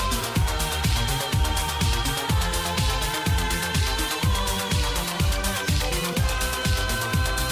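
No technical faults can be heard anywhere in the audio.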